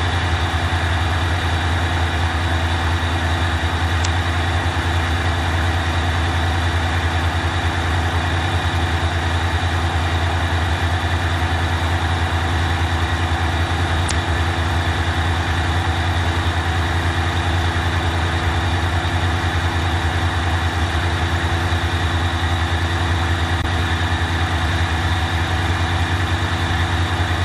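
Damaged data in a compressed stream corrupts the audio at 4.01 to 4.06 s, 14.07 to 14.11 s and 23.60 to 23.65 s. Faulty bytes make the decoder misread frames and lose sync until the next frame header, so each spot sounds like a brief chirp, squawk, click or short hole.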